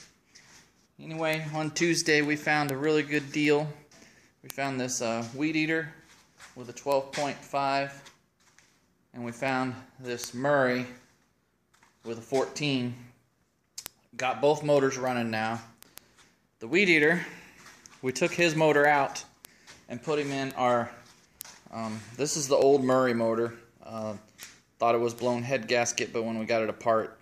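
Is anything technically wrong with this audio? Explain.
Yes. From 0.13 s to 27.15 s, word clock ticks recur roughly every 0.15 s. An unlocked receiving clock, off by about 150 ppm, drops or repeats one sample per slip, producing sharp ticks.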